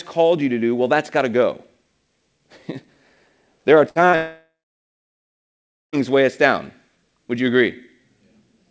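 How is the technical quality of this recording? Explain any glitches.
The recording has three network glitches clustered between about 3.9 and 6.0 seconds. The sound also stops at 8 kHz, which fits a G.722 call codec.

Burst of packet loss, 3.89 to 3.98 s, just after "there are": a short run of packets went missing. The receiver stretched the last sound and faded it out, and about 60 ms is gone.

Short concealed packet loss, 4.10 to 4.16 s: roughly 30 ms never arrived in time. The decoder filled it briefly, leaving a quick smear before the next break.

Long network dropout, 4.16 to 5.96 s, ending at "weigh us down": the likely cause is a stall in the network connection. A brief fading fill gives way to about 1.4 s of silence, and roughly 1.8 s of audio is lost.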